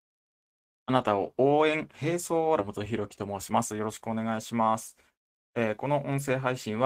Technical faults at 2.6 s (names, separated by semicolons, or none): skip ahead; jitter buffer speed-up